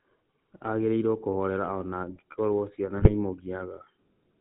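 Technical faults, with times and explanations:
Throughout, GSM full-rate codec: the speech is band-limited to below 4 kHz and carries a plainly audible buzzy, gravelly roughness, because the decoder rebuilds the voice from a vocal-tract filter driven by sparse, regularly spaced pulses, which fits a 13 kbps full-rate stream.
2.96 to 3.13 s, GSM bit errors: for about 0.17 s the voice breaks into squawking, gargling distortion as corrupted filter, pitch and gain values warp the spectrum and level, which points to several damaged frames and roughly 2% of bits flipped.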